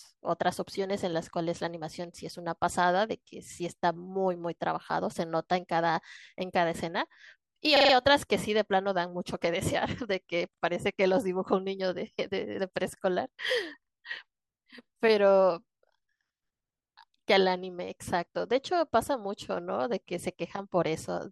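At 7.77 s and again at 10.54 s, fresh audio failed to reach the playback device in time, so it replayed its last buffer: a repeated buffer fault. Each repeat is about 43 ms long, which fits a 2048-sample buffer. The first stutter runs to 7.94 s with four extra plays, the second to 10.62 s with two, each joined hard to the next. The result is a rapid, machine-like stammer in the speech, with essentially nothing lost afterward.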